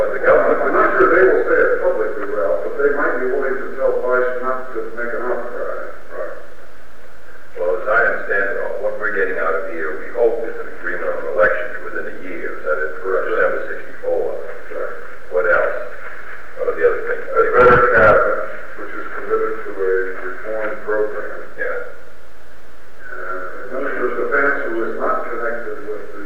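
No audible faults are present anywhere in the recording.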